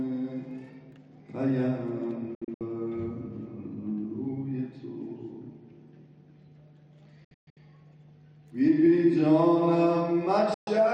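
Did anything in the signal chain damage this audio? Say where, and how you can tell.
Yes. The damage happened at the reception stage, as a digital broadcast dropout. The sound mutes with a fast fade of about 3 ms in three places: broken holes across 2.35–2.61 s and 7.24–7.57 s (longest single gap 128 ms), and one gap at 10.54–10.68 s. The gap lengths are multiples of 32 ms, which fits whole frames failing their checksum. The receiver silences each bad frame, and that audio is gone for good.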